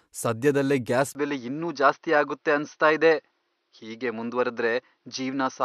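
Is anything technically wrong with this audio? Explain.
Yes. From 1.13 s, just after "ಸದ್ಯದಲ್ಲೇ ಗ್ಯಾಸ್", through to the end, the speech turns duller, with nothing above 6.2 kHz, after a brief 20 ms gap. The level holds steady and a faint new noise floor sits about 50 dB down. This is likely an input switched to a poorer device, whose narrower bandwidth and own noise replace the original microphone's.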